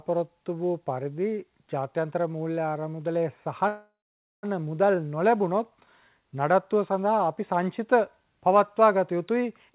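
From 3.68 to 4.45 s, a fading buzz then half a second of silence: a call audio freeze, likely delayed packets draining the jitter buffer.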